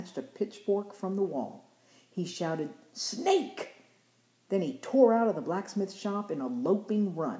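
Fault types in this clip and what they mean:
No fault types appear in this clip, so there is nothing to explain.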